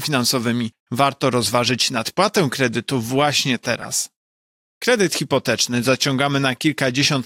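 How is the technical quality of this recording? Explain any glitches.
There's one glitch worth flagging. From about 3.81 to 3.85 s you get a corrupt frame decoded: a couple of damaged frames with flipped bits got played anyway, so misread gains and codes throw energy into the wrong frequencies, giving a short chirpy blip peaking somewhere around -25 dBFS.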